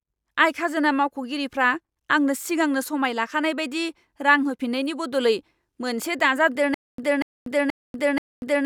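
Playback likely stalled from 6.74 s to the end, replaying its last fragment at each retry before running dry. The result is a stutter with silent gaps: a 239 ms burst of speech repeats four times, each followed by 240 ms of digital silence, with the intended continuation lost.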